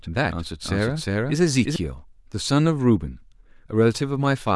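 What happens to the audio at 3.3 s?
Nothing goes wrong at 3.3 s; the speech carries on intact through that moment, with no dropout, click, distortion or other fault to be heard.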